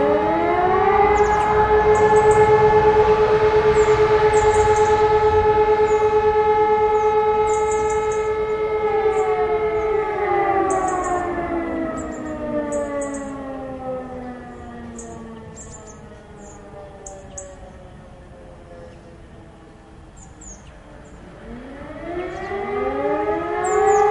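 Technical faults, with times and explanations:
No technical faults can be heard in this recording.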